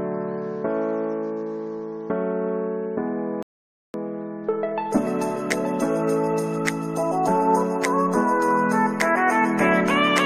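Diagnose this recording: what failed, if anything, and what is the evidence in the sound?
Playback-stage rebuffering stall: sound drops to silence at 3.43 s, resuming seamlessly at 3.94 s, a clean 0.52 s blank gap on spectrogram and waveform, nothing lost.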